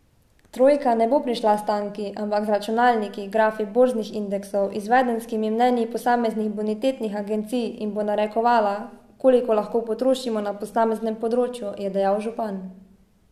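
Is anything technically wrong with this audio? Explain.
No, nothing in this speech recording points to a technical problem with the signal.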